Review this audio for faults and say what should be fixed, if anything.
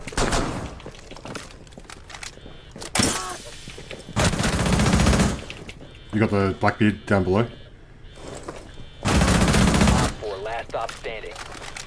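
Nothing needs fixing: the signal holds steady throughout, with no dropouts, level problems or other disturbances anywhere in the recording.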